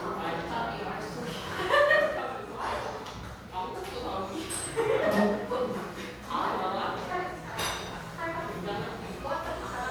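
No technical faults can be heard in this recording of sounds; the signal holds steady throughout without any audible defect.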